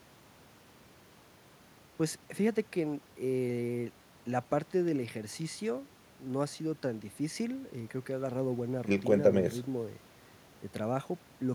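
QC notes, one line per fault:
No technical faults were found anywhere in the speech signal.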